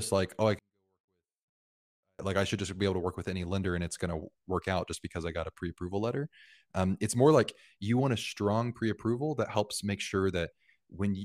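From 0.59 to 2.19 s, just after "like oh i", a 24-bit alignment error occurs: 24-bit samples sitting in the low bytes of 32-bit words are read as full 32-bit values. The speech stays clean but drops about 48 dB, nearly inaudible, until "like i should just".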